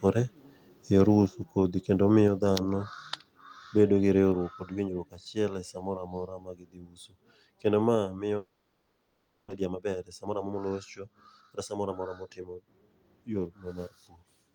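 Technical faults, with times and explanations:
1.26 s, 2.28 s (after "kodhi kendo"), 4.32 s (after "bedo gi", before "kod winjruok achiel e") and 7.95 s, microphone volume stepped down: the level drops abruptly each time, by about 4, 4, 3 and 2 dB, staying lower afterwards. Likely the call software judged the input too hot and cut the microphone gain in single steps.
8.37 to 9.52 s, long network dropout: after "ma miyo" the sound smears into a fading buzz, then about 0.27 s of near silence before audio resumes, with roughly 0.6 s of material gone. Likely no packets arrived for over a second, so the receiver extended the last sound before giving up.
9.56 to 12.09 s, jitter buffer speed-up: the speech runs about 20% fast at unchanged pitch, sounding hurried. The receiver trimmed short pitch-period slices repeatedly, removing around half a second of backlog that built up after the delayed audio arrived together.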